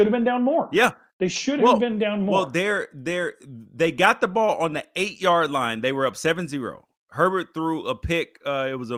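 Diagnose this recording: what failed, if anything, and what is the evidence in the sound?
No faults detected in this recording.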